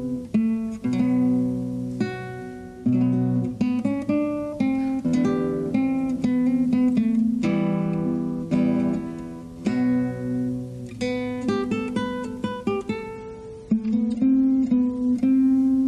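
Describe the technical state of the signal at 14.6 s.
At 14.6 s, an adaptive stream at a lower bitrate (13.15–15.15 s), pointing to MP3 at 32 rather than 128 kbit/s, adds artefacts.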